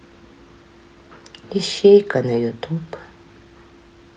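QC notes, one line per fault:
No faults heard.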